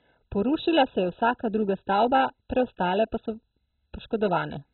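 From the first moment to the end, the speech sounds dull and muffled, with a gurgling, granular roughness running through it, most likely from MP2 compression at a very low bitrate, which fits something around 16 kbps. Starved of bits, the coder has shut off every sub-band above 4 kHz and coarsely quantised the rest. A spectrogram shows a flat ceiling at 4 kHz with blank space above, and patchy, flickering blocks of energy below it.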